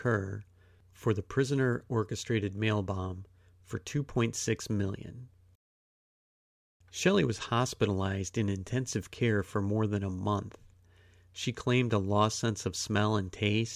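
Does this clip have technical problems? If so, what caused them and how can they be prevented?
No, this clip has no technical problems, so there is nothing to trace back to a cause or to prevent.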